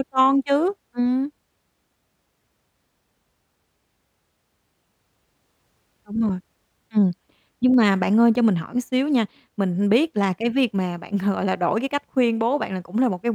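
At 7.74 s the speech carries a single sharp click, most likely from dropped samples: a handful of samples, around a tenth of a millisecond, vanish from the stream, so the waveform leaps straight to a later value. That step shows as a thin vertical line across the spectrum. Unlike a dropout, no sound goes missing and there is no audible gap or silence, only the instantaneous tick where the waveform jumps.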